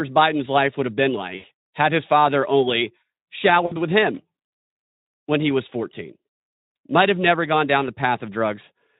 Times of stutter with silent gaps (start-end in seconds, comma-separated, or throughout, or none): none